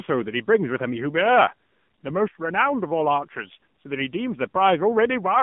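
A short speech clip that's been through an AMR narrowband mobile codec the whole way. Everything sits in a phone-line band of roughly 150 Hz to 3.5 kHz, so there's no air or low body. The codec rebuilds the voice from a vocal-tract model and a few excitation pulses per frame, and here that damage is plainly audible: buzzy and synthetic. That fits a low AMR-NB mode of around 7.4 kbps.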